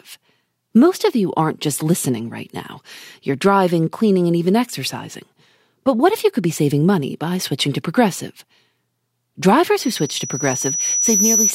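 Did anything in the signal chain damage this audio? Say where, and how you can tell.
Yes: from 9.78 to 11.54 s a 5.9 kHz squeal swells over about a second and a half to about 5 dB above the speech. This is loudspeaker feedback squeal in the acoustic playback loop, where the microphone's loop gain exceeds one.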